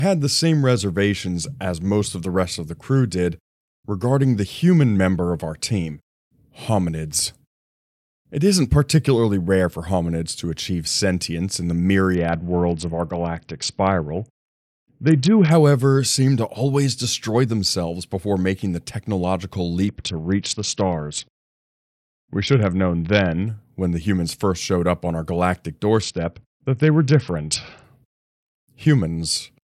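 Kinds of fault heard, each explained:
Bluetooth SBC bit pool drop: the encoder ran short of bits three times, at 12.1–15.5 s, 19.9–23.5 s and 26.0–27.8 s. The upper bands lose their treble and the speech turns gritty, which fits a fall from bit pool 31 to 7, near 61 kbps.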